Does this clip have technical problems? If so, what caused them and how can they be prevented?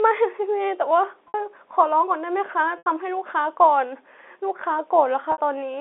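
Yes, there's packet loss with pitch repetition in this speech at 1.28 s, 2.78 s and 5.32 s. Gaps of 60, 80 and 60 ms were bridged by looping the last pitch period, which gives a brief buzzy hold, consistent with 20 ms packets going missing. To prevent it, use a bigger jitter buffer, FEC or a steadier network path.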